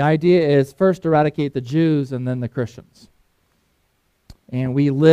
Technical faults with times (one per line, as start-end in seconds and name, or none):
none